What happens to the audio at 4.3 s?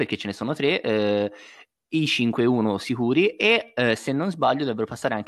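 Nothing goes wrong at 4.3 s; the speech carries on intact through that moment with no dropout, click or distortion.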